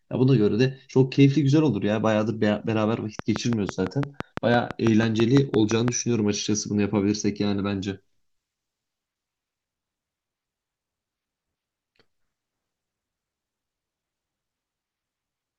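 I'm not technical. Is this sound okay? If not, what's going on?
No. From 3.19 to 5.89 s there's a train of clicks, about fifteen evenly spaced ticks at roughly six per second, heard over the speech and in its gaps. Unlike random crackle, they're much the same and regular, likely from nearby electrical interference or a faulty connection or power supply.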